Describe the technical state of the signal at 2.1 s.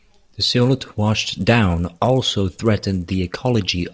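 At 2.1 s the speech carries the fault that runs through the whole clip: a resampler restarted on every block. The 24 kHz to 16 kHz conversion treats each 10 ms block separately, so every block edge has a small error, producing a 100 Hz buzz that is present only while speech is sounding. A spectrogram shows faint vertical striations every 10 ms and a comb of lines at 100 Hz multiples; the waveform shows tiny steps at each block boundary.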